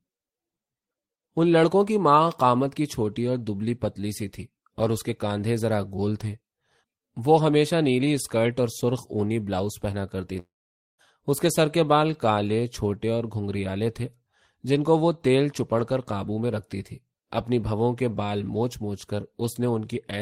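From 3.31 to 7.66 s, the converter's sampling clock wanders by roughly a microsecond or two, so each sample is taken at a slightly wrong moment. The resulting error tracks how steeply the waveform is changing, sitting somewhere around 45 dB below the speech. It comes through as a fine hiss or grittiness clinging to the louder and brighter parts of the speech, vanishing in the pauses.

From 10.39 to 11.01 s the speech stops, and about 0.6 s of it never returns. A smeared, fading continuation of the last sound fills the start of the gap, then about half a second of near-silence or faint steady noise follows before the speech resumes further on. The cause is likely a long network dropout, with the receiver's concealment papering over the missing packets until it gives up.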